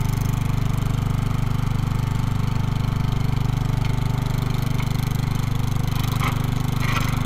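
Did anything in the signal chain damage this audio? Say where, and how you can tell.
No, nothing in the chain damaged it.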